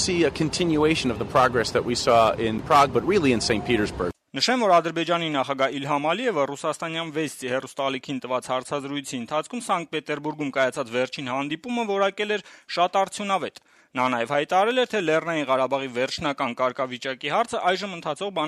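No technical fault can be heard anywhere in this audio, with no moment that stands out as a problem.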